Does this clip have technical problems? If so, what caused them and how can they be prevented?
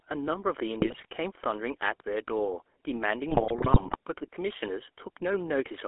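Yes. Throughout, the speech has the buzzy, gravelly texture of the GSM full-rate codec. The vocal-tract model is driven by a coarse pulse excitation, and the sound is confined to roughly 300 Hz to 3.4 kHz, which fits the 13 kbps full-rate codec. The buzz sets it apart from plain band-limiting, which only dulls the sound. Keeping calls on a wideband codec such as AMR-WB or EVS would prevent it.

GSM bit errors break the speech into squawks, pops and gargling from 0.8 to 1.05 s and again from 3.28 to 3.96 s. Corrupted filter, pitch and gain values distort the spectrum and swell the level frame by frame. Packet-loss gaps would fall silent or repeat instead. A stronger radio link with better signal would prevent it.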